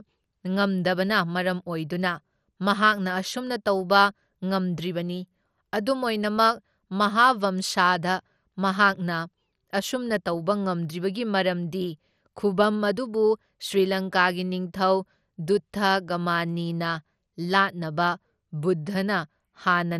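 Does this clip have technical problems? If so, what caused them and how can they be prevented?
Yes. Throughout, the speech sounds dull and gurgling, with a granular roughness and nothing above 14.4 kHz, the likely cause being MP2 compression: starved of bits, its upper sub-bands switch off and flicker while the rest are coarsely quantised, which fits a bitrate around 64 kbps. Encoding at a higher bitrate or with a more efficient codec would prevent it.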